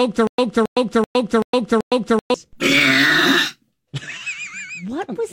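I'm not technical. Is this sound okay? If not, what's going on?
No. A stutter with silent gaps runs from the start to 2.34 s: a 0.27 s burst repeats five times, likely from a stalled stream.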